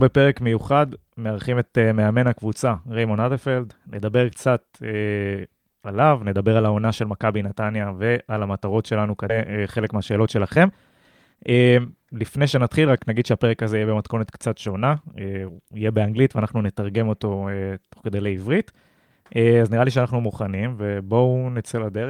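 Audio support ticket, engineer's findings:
Skip ahead, 9.29–9.31 s: about a second of queued speech discarded, likely a jitter buffer overflow. Playback jumps forward almost seamlessly, with no fill.

Jitter buffer speed-up, 9.39–10.67 s (107%, roughly 0.1 s trimmed) and 11.33–13.33 s (118%, roughly 0.4 s trimmed): receiver shedding excess buffered delay by cutting pitch periods. Speech runs hurried at unchanged pitch.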